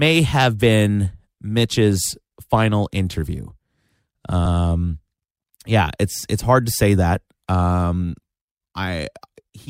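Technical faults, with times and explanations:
4.45–4.57 s, repeated frames: a 120 ms stretch of speech plays twice in a row, which fits a run of six 20 ms frames sent again, so the clip runs 120 ms longer. Unlike a dropout, nothing goes missing; the same fragment is replayed as a stutter.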